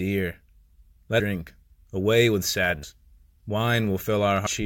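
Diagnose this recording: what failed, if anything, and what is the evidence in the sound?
The decoder dropped whole compressed frames, either missing from the file or rejected as damaged. The speech jumps forward three times: at 1.20 s by roughly 300 ms, at 2.83 s just after "away with" by roughly 200 ms, and at 4.46 s by roughly half a second. These gaps fit whole multiples of a 32 ms frame. At each join the missing stretch of speech simply vanishes.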